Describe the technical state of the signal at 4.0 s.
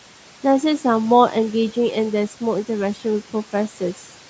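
At 4.0 s the noise suppressor is misjudging part of the speech as background noise. Between 3.53 and 4.09 s it turns speech energy down along with the noise, by as much as about 8 dB, over roughly 150 ms in that window. This is speech cut by the noise suppressor. Softer parts of the speech around 4.0 s, such as quiet consonants and word endings, sound swallowed or faint.

Noise suppressor artifacts are also present at this moment, as they are across the whole clip. The suppressor lowers the frequency bands it treats as steady noise by about 12 dB, frame by frame, so the residual room noise dips whenever speech pauses and rises back underneath it.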